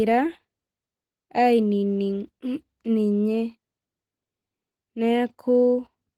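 Opus voice compression runs through the whole speech clip, and its damage is plainly audible. The sound suggests hybrid operation at a low rate, perhaps around 16 kbps in 20 ms frames. A linear-prediction layer carries the band up to 8 kHz, and a thin transform layer sketches the content above it, which still reaches 20.2 kHz. Coarsely coded excitation at this rate leaves the speech with a rough, slightly synthetic texture.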